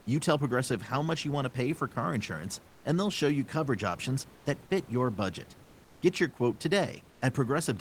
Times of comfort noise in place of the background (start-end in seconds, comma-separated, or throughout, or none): 2.67-2.84, 4.34-4.45, 7.10-7.21